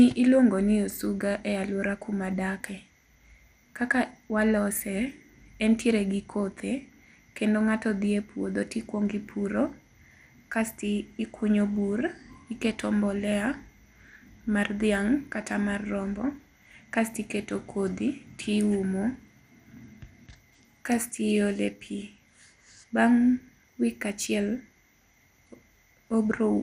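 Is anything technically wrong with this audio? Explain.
Yes. Throughout the speech there is MP2 compression damage, likely from an encoder starved of bits at something near 80 kbps. Upper sub-bands switch off and the rest are coarsely quantised, so it sounds dull and gurglingly granular. A spectrogram shows nothing above 15.2 kHz and flickering high bands.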